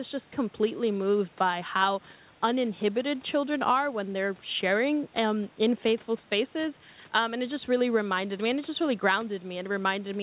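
Nothing stood out on listening to this speech recording.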